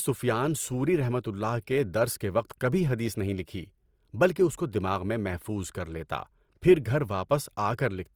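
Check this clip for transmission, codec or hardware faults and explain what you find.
One fault runs through the whole clip: Opus compression. It is plainly audible from start to finish. The speech sounds grainy and rough, with a noisy texture where detail should be. The cause is likely the Opus codec in its music (CELT) mode, at a rate that fits about 24 kbps. Short of bits, the encoder keeps each band's energy but refills the fine detail by copying lower bands or adding noise. That causes the graininess. The band stays full, with nothing above about 20.3 kHz.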